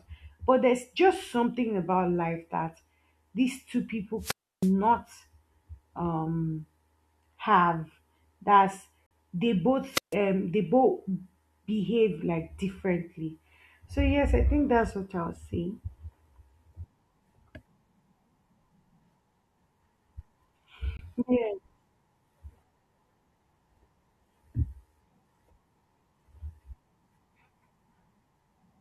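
At 4.19–4.72 s, a wireless microphone squelch dropout: the radio signal fades, hiss swells, then the receiver mutes for 313 ms. The spectrogram shows broadband noise, then a blank band. At 9.06–9.12 s the speech vanishes for 43 ms with abrupt edges, a flat-line gap in the waveform, likely a Bluetooth dropout of late, discarded packets. A second squelch dropout follows at 9.93–10.15 s, with a 145 ms mute. At 20.97–21.01 s, a shorter 21 ms hole of the same clean-edged kind appears.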